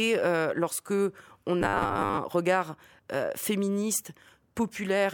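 Robotic sound from repeated short buffers runs 1.62 to 2.18 s, between "euh lorsque on" and "regard euh féministe". A metallic 100 Hz buzz runs through most of the span, likely from audio arriving too seldom, so a 10 ms chunk repeats.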